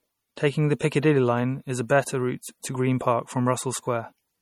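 Bits look to have run short throughout in what is likely MP3 compression, pointing to a low bitrate around 48 kbps: weak frequency components flicker between frames, and the speech takes on a plainly audible watery, swirling quality with metallic chirping on sibilants. Pre-echo appears at 0.36 s and again at 0.79 s, where quantisation noise spread across a transform block spills about 12 ms ahead of a sharp onset, so each attack is preceded by a brief hiss and sounds softened and smeared.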